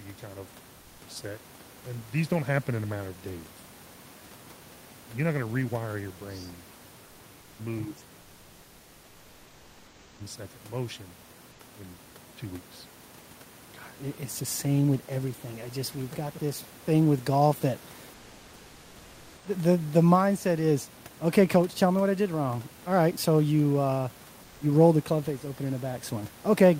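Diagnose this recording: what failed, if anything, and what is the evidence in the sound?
Codec stage first: in the pauses the real room background gets swapped for comfort noise, at 0.79 to 1.01 s, 11.51 to 11.59 s, 18.13 to 19.45 s and 24.43 to 24.61 s. The room noise, which sits about 29 dB under the speech, goes flat and featureless and drops by about 2 dB. That's likely discontinuous transmission, and it fits Opus DTX, with the receiver filling the gaps with shaped synthetic noise.

Call processing is next, with speech suppressed in double talk three times: at 7.49 to 7.59 s the voice dips by something like 20 dB, at 7.87 to 8.02 s by around 10 dB, and from 8.95 to 10.23 s it dips by up to roughly 25 dB over about a second. The likely cause is the echo canceller losing track of which sound was local talk and which was loudspeaker echo, so it turned both down.

The same echo canceller also shows background gated by the echo canceller at 8.31 to 8.43 s. 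The room sound drops by about 9 dB for roughly a tenth of a second and then comes straight back. What's happening is that the canceller clamped the microphone hard while the far end played through the speaker, then released once it judged the echo had gone.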